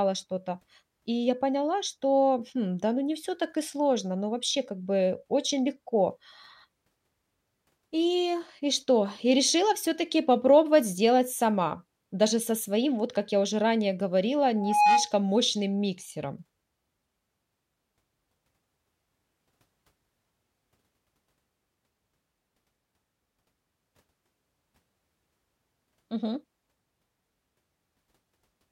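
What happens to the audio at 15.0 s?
A loudspeaker feedback squeal runs from 14.55 to 15.13 s, right after "я уже ранее говорила" and ending before "мощным миксером". The microphone is picking up the loudspeaker it feeds, and at 834 Hz the loop gain passes one, so that tone feeds itself. It swells over about a third of a second into a steady whistle sitting about 5 dB above the speech, then stops as the loop is broken.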